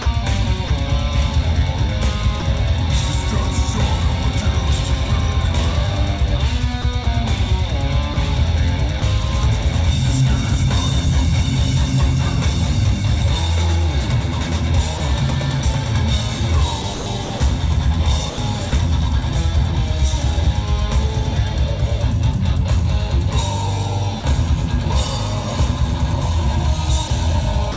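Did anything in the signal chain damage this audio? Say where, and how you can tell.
Yes, in the call processing stage. There are four stretches of sound chopped by the voice detector, at 0.02–0.70 s, 6.82–9.02 s, 16.82–18.72 s and 27.08–27.76 s. About 320 ms of sound is swapped out in the 16.82–18.72 s stretch. That's likely the sender's detector toggling on the quieter parts and filling the gaps with comfort noise.

Then there are three short holes where sound is dropped by the voice detector, at 2.40–2.42 s, 14.98–15.00 s and 24.20–24.24 s. For 20–40 ms, the sound gives way to steady noise or near silence and then snaps back. The likely cause is the detector taking quiet material for background and stopping sending, so comfort noise filled in, all over a call path that tops out around 8 kHz.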